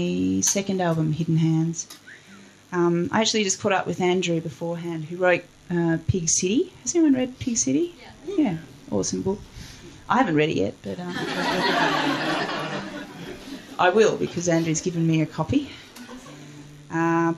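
No technical faults can be heard anywhere in this recording.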